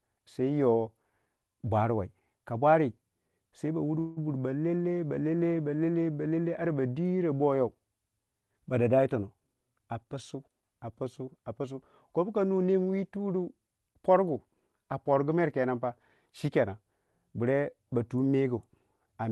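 At 3.99 s to 4.19 s, packets were likely held up in transit, so the jitter buffer ran dry and the receiver stretched the last sound for about 0.17 s as a fading buzz or hiss. This call audio freeze adds a gap, with nothing lost, before "buri balelel balele balele" resumes.

From 8.98 s to 10.63 s, the jitter buffer held more audio than its target, so the receiver repeatedly trimmed short pitch-period pieces, roughly 150 ms in all. This jitter buffer speed-up makes the speech run about 9% faster at unchanged pitch, sounding hurried.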